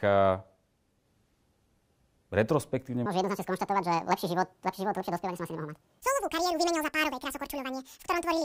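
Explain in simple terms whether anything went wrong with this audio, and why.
Something did go wrong. From 3.06 s to the end, the speech runs at the wrong speed, about 1.75 times faster than it was recorded. The voice jumps up by close to an octave and sounds squeaky and rushed. This is a section at the wrong speed, likely from that part being played against the wrong clock. It isn't a simple pitch change, because pitch and pace rise together at the same moment.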